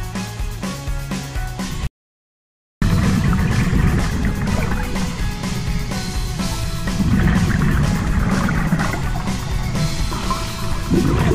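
At 1.87 s the sound cuts off abruptly into total silence. It returns mid-flow at 2.82 s, so 0.95 s is missing. This is an audio dropout to silence. No room tone remains in the gap. The input was likely lost while silence was still written.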